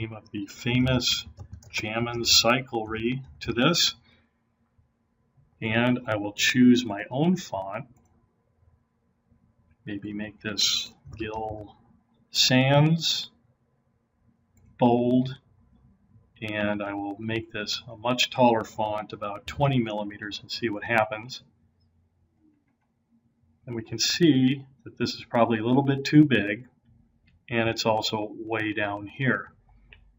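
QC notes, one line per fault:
0.13–30.10 s, periodic USB or driver dropouts: a fraction of a millisecond is skipped every 0.125 s, a couple of hundred times, as the bus or driver stalls on a fixed cycle. Waveform shows tiny splice steps, spectrogram shows evenly spaced thin vertical lines, heard as steady ticking under signal.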